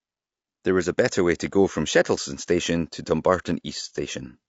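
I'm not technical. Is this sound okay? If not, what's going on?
No. The speech was likely squeezed through low-delay AAC compression, the kind video calls use, which works in very short slices and captures a voice's pitch poorly. Throughout the clip, that leaves the voice plainly rough and grainy, with a fizzy noise between its tones.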